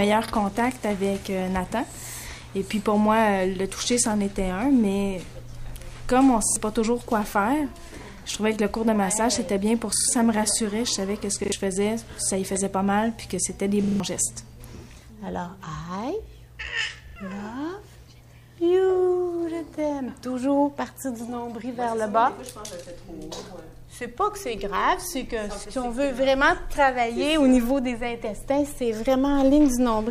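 A short stutter breaks the sound at 0.28, 6.48, 9.96, 11.44, 13.84 and 17.08 s, the same brief fragment replaying with a hard join each time. That is a repeated buffer: fresh audio arrived late, so the player looped its last block, pointing to a 40 ms buffer. The stutter lasts longest at 13.84 s, with four extra plays, and roughly 40 to 150 ms of real audio go missing at each one.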